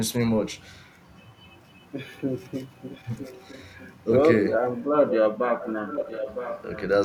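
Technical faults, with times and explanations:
2.9–3.88 s, 5.08–5.16 s, 5.59–5.69 s, 5.87–6.82 s: echo leak. A copy of the speech returns about 955 ms late, at about 20, 5, 15 and 10 dB below the speech. This is likely a far-end loudspeaker echo that the canceller did not fully remove.
3.0–3.06 s: speech suppressed in double talk. The speech briefly dips by about 20 dB while the echo overlaps it, likely because the canceller turned down both signals together.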